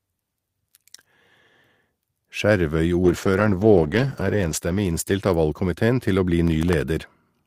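From 3.05 to 5.71 s, a call bitrate drop takes the speech from 40 to 13 kbps. Coarser coding makes it rough and muffled, bottoming out for about 1.55 s.

From 6.48 to 6.82 s, processor overload crackle tears through. Around ten tiny buffers, under a millisecond each, miss their deadlines and replay old audio, causing gritty clicks.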